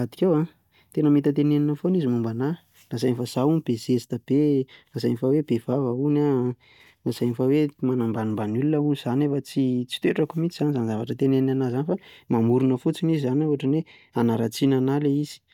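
No audible technical faults detected.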